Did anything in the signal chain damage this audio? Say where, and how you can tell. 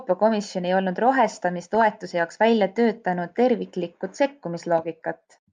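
Yes. The whole clip sounds dull and grainy, with a gurgling edge on the speech and the top end flickering in and out. That's MP2 compression at the codec stage, likely from a low-rate MPEG Layer II encode, fitting something around 80 kbps. Upper sub-bands get starved of bits and drop out.

There's also a short burst of DAB burbling from about 1.62 to 1.82 s, just before "jaoks välja töötanud terviklikku". Weak reception lets bit errors slip past error correction into the MP2 frames, so wrong samples put short blips of noise into single sub-bands.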